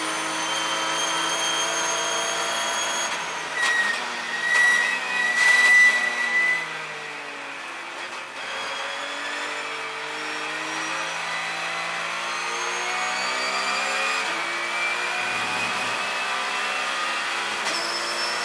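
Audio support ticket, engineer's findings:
No faults found in this audio; nothing to attribute to any component.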